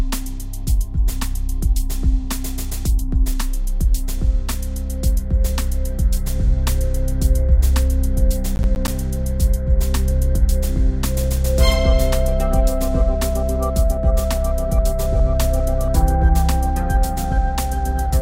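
From 8.56 to 8.88 s a burst of gritty crackle tears across the sound, a rapid run of tiny dropouts with hard edges that stops as suddenly as it starts. This is processor overload crackle. The processor fell behind and missed a handful of buffer deadlines within that third of a second. Each miss left a short silent gap, and the spacing of the clicks suggests buffers of around 10 ms.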